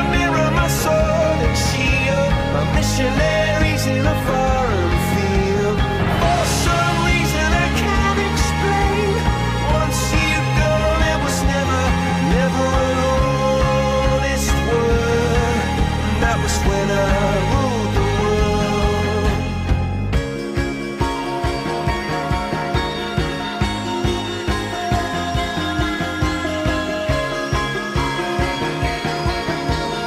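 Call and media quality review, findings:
No audible faults found; nothing to flag.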